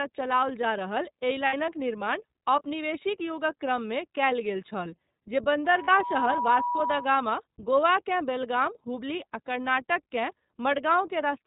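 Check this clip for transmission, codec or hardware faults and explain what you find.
Three faults are audible: iLBC coding throughout, two short gaps from lost iLBC frames, and a feedback squeal.

iLBC codec, throughout. Nothing above 4 kHz survives. Each frame is coded on its own, leaving the speech slightly rough and synthetic. The sound fits 13.33 kbps with 30 ms frames.

Lost iLBC frames, at 1.46 to 1.54 s, between "चलाओल जा रहल एहि" and "निर्माण औपनिवेशिक युगक क्रममे", and again at 5.84 to 5.89 s. The first gap lasts about 60 ms and the second about 30 ms. Each sounds like a brief, buzzy held vowel. The decoder repeats the last pitch cycle mixed with noise. Recovery is immediate because frames stand alone.

Loudspeaker feedback squeal, from 5.65 to 7.30 s, just after "कयल गेल छल जे". A 972 Hz tone swells over about half a second until it is roughly as loud as the speech. The microphone picks up its own loudspeaker, and the loop gain exceeds one at that frequency.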